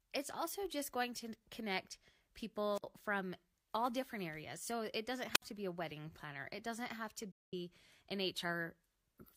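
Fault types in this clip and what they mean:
Wireless microphone squelch dropout: The radio link fades until the receiver mutes its output. Here a burst of hiss precedes a roughly 60 ms silent hole at 2.74 s, before "from all different areas", and again at 5.32 s after "it doesn't". The static is what distinguishes it from codec muting.
AAC frame loss with muting: Lost frames are decoded as zeros, so overlapping windows fade the speech out and back in. After "doesn't have to", a 213 ms gap at 7.32 s, fitting about five frames, has soft edges with no static, unlike squelch.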